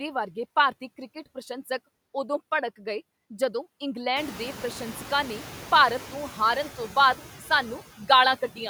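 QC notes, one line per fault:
Throughout: noise suppressor artifacts. Steady noise drops about 12 dB between phrases. It swells back under speech as per-frame band gains rise.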